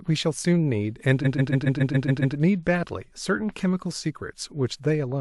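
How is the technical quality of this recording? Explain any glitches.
The recording has one clear glitch, a stutter from repeated frames between 1.23 and 2.35 s. A short run of compressed frames was sent again and again, so the decoder played the same 139 ms block eight extra times. The speech loops audibly and the clip grows by about 1.1 s.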